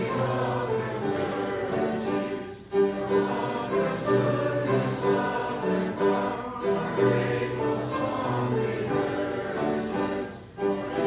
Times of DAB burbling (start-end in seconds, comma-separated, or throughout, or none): none